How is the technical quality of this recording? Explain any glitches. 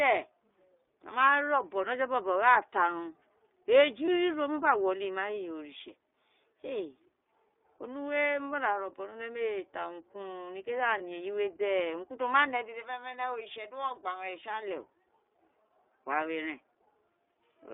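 The recording quality is limited, with a narrowband codec sound throughout and two short dropouts.

The iLBC codec confines the speech to roughly 300 Hz to 3.6 kHz. Its frame-by-frame excitation coding, consistent with the 15.2 kbps mode, leaves a plainly audible rough, synthetic edge.

Lost iLBC frames occur at 4.06 s and 10.98 s, each fitting one missing 20 ms frame. The decoder repeats the last pitch cycle with added noise, heard as a brief buzzy held vowel before clean recovery.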